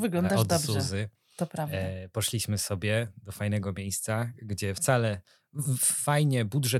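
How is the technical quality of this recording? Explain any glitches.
The recording has no technical glitches to explain, and the signal holds steady without any break or disturbance anywhere in it.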